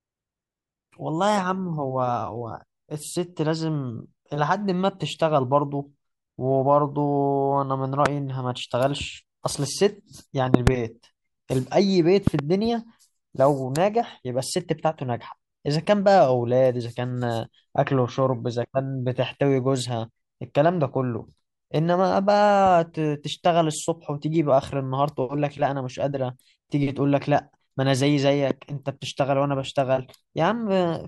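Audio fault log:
8.06, 10.54–10.70, 12.27–12.41 and 28.51 s: loud pop. Single pops at 8.06 and 28.51 s and double pops in the two ranges jump about 20 dB above the speech (the last about 15 dB). Each is likely a sudden voltage step, such as a switch or static discharge, added while the speech continues underneath.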